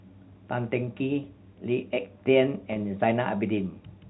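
At 2.73 s, a packet of the speech stream failed to arrive, a gap of about 30 ms that fits a single lost packet. The receiver concealed it with packet loss with pitch repetition, looping the last pitch period until 2.76 s. The result is a brief, slightly held buzz where the voice seems to stick on one tone before carrying on. The G.711 telephone coding around it keeps the audio below 4 kHz.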